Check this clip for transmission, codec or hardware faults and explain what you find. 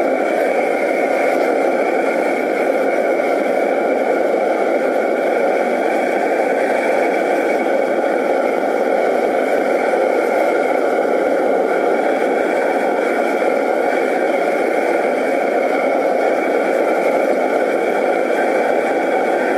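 Nothing wrong can be heard anywhere in this recording.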